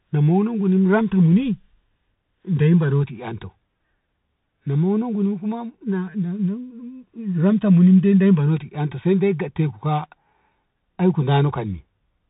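From start to finish the speech passes through a Bluetooth CVSD headset codec, plainly audible, with a delta-modulation sound that fits a 64 kbps CVSD stream. Each sample is coded as a single up-or-down step whose size adapts, and the narrowband link passes nothing above 3.8 kHz; s sounds turn scratchy, and a fine granular hiss sits beneath the speech. A spectrogram shows a hard ceiling at 3.8 kHz with a speckled noise floor. The waveform looks grainy and staircase-like on steep transients.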